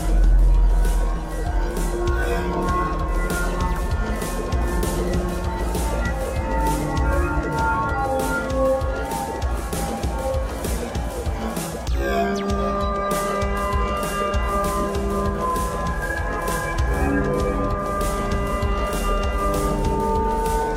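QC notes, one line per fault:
No faults found on review of this audio.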